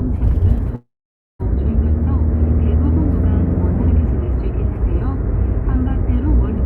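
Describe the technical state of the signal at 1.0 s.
At 1.0 s the signal is inside a call audio freeze running from 0.75 to 1.41 s. The sound stops advancing. The last bit of sound stretches into a short fading buzz, then drops to silence for about 0.52 s. Packets were likely held up in transit, leaving the jitter buffer empty. When they arrive, the sound resumes exactly where it stopped. Nothing is lost, but everything after is pushed 0.64 s later.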